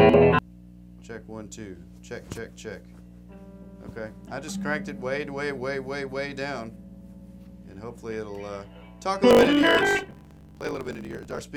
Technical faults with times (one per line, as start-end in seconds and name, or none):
9.29-11.43 block size mismatch (truncated)